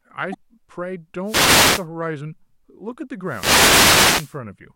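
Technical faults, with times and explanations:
0.30 to 0.36 s, damaged data in a compressed stream: A short stretch of the compressed speech stream arrived corrupted, so the decoder could not read those frames properly, lost its place in the stream and had to hunt for the next valid frame header before it could resume. For roughly 56 ms the speech gives way to a brief glitch, because the decoder is producing sound from garbage or mis-synced data rather than the real signal.
1.24 to 1.87 s and 3.24 to 4.39 s, wireless microphone noise hit: Twice the radio link from the analogue FM wireless microphone faded as reflected signals partly cancelled the direct one at the receiver. With less carrier reaching it, the receiver's own noise rose to the surface, giving a swish or burst of static over the speech. The first hit lasts about 0.6 s and the second, longer one just over a second.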